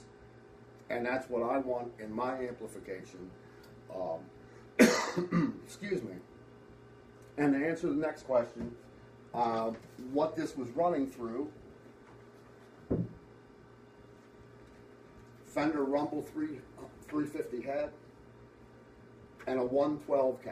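No technical faults can be heard anywhere in the clip, so there is nothing to describe in time order.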